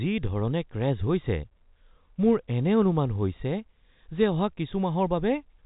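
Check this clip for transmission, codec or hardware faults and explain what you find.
Nothing to report: the speech carries the expected G.711 telephone coding band, with nothing above 3.8 kHz, as that path normally behaves.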